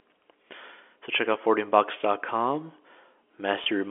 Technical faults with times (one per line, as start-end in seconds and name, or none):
3.64-3.66 packet loss with pitch repetition